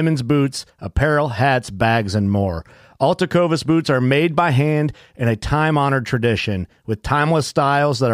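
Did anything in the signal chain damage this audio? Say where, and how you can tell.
Yes. On the Bluetooth link, lost LE Audio frames left the LC3 decoder to conceal a gap from about 1.66 to 1.68 s, right after "boots apparel" and before "bags and more". Lacking real data for that 20 ms, which fits two 10 ms frames, the decoder repeated the last good spectrum with randomised signs. The result is a brief noisy smear where the speech's harmonic structure blurs.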